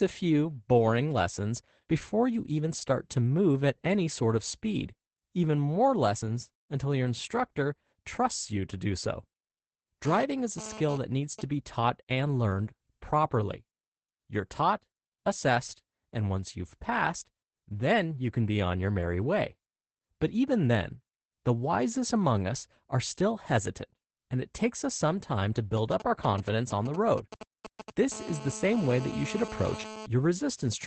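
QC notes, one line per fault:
Throughout: Opus voice compression. The codec runs in its SILK speech mode at a low 12 kbps with 20 ms frames. Nothing is heard above 8.5 kHz. The coarse excitation coding makes the speech plainly muffled, hoarse and slightly robotic.
10.05–11.41 s: GSM phone buzz, ending just before "be taught and learned". A nearby 2G phone transferring data sends radio pulses at 217 Hz. The audio circuit rectifies them into a raspy, harmonic-rich buzz about 13 dB below the speech. It comes and goes.
25.77–28.14 s: GSM signalling bursts, right after "us some time to". A nearby phone sends short groups of radio bursts while signalling. Once rectified, they make a galloping dit-dit-dit of brief 217 Hz buzzes, roughly 10 dB below the speech.
28.14–30.06 s: GSM phone buzz. The signalling gives way to an active call. The phone now transmits in bursts 217 times a second. This gives a steady, hard buzz about 13 dB below the speech, with no relation to it.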